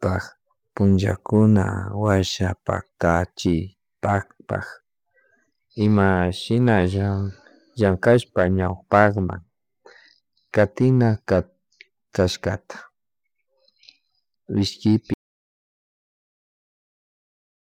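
At 15.14 s the speech just stops dead and never comes back, so the last 2.57 s or so, right through to the end, is an audio dropout to silence. It's true silence, not a quiet room: the background tone vanishes along with the voice, and whatever was being said is simply gone. That points to the input itself going away, most likely a device disconnecting, a link failing or a mute being hit while the recorder kept writing.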